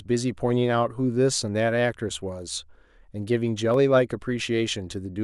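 From 1.12 s to 5.05 s, about four clicks recur every 1.31 s: likely clock drift buffer slips, with mismatched device clocks (roughly 150 ppm apart) dropping or repeating a few samples each time.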